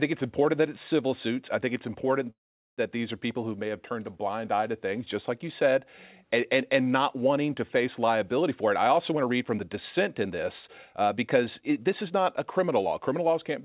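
At 2.3 s, right after "I think it's important", packets were most likely held up in transit, so the receiver's jitter buffer ran dry and produced a call audio freeze. The receiver briefly stretched the last sound into a fading buzz or hiss, then left about 0.43 s of silence. The hold lasts until 2.81 s, when the sound resumes at "these are people who". Nothing is lost. Everything after it is simply pushed back by about 0.48 s.

From 8.43 s, after "not wanting to face", the jitter buffer is holding more audio than its target and starts a jitter buffer speed-up to drain the excess. Until 13.34 s it repeatedly cuts out tiny pitch-period-sized slices, about 0.4 s in total. Delivery therefore runs at roughly 109% speed with the pitch unchanged, and the speech sounds hurried. Like the rest of the call, this stretch has no content above 4 kHz, which fits a narrowband G.711 mu-law codec.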